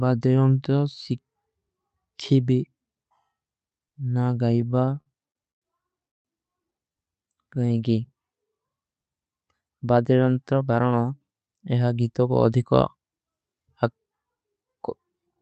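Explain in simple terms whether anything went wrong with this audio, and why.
Several things went wrong, all from the audio arriving unevenly over a call connection.

From 4.61 to 5.64 s the speech has repeated stalls (stutter): twelve short hitches, the longest about a tenth of a second, during which the receiver stretched the last sound while waiting for more. About a quarter of that stretch is filled-in sound, so it drags and jerks, but nothing is lost. The same thing happens more briefly from 6.93 to 7.11 s, with four tiny hitches of about a hundredth of a second at most. What sets a stutter apart is the many small interruptions in a row, rather than one long stop.

At 6.08 s there is one clean stop of about 0.17 s that is almost entirely silent. The speech then carries on exactly where it left off. This is a call audio freeze, most likely caused by a single burst of data arriving late. 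Unlike the stutter, it is a single gap, and because nothing is skipped, the speech afterwards is simply pushed later.

From 6.97 to 7.79 s there is a jitter buffer slow-down. The speech runs at about 87% of normal speed but keeps the same pitch, so it sounds drawn out rather than deeper. The receiver added roughly a tenth of a second by repeating tiny slices to rebuild its reserve.

From 9.75 to 10.61 s the opposite happens: a jitter buffer speed-up. The speech runs at about 111% of normal speed at the same pitch, sounding hurried, because around a tenth of a second of tiny slices was trimmed out to catch up. Unlike a freeze, nothing stops here. The speech just rushes briefly.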